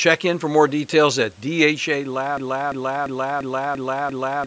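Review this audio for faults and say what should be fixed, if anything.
From 2.37 s to the end, the speech falls into a broken-record loop: a 0.34 s fragment repeats exactly, back to back, six times, and the audio that belonged there is lost. The likely cause is a player, encoder or stream that stalled and kept resending its last held fragment. A waveform or spectrogram shows the same block copied every 0.34 s. The fix is to detect a stalled buffer and output silence or concealment rather than replaying old data.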